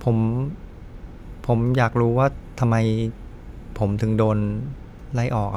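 Listening through the speech, nothing stood out as a technical fault at any point.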